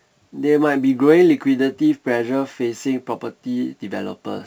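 Throughout, crude rate conversion, consistent with 48 kHz to 44.1 kHz by simply dropping samples, adds a gritty, inharmonic fizz roughly 35 dB below the speech.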